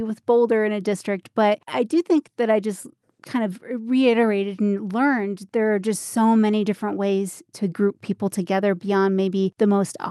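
Nothing stood out on listening to this speech clip, which carries the expected sound of a WebRTC call path with its Opus coding and a top end that stops at about 12 kHz.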